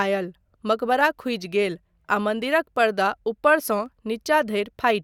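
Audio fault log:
1.01–4.81 s clock drift buffer slips: a click every 0.95 s in the speech, likely from two unsynchronised clocks dropping or repeating a few samples.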